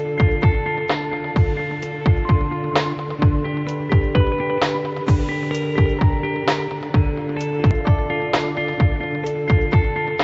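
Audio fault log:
No faults detected.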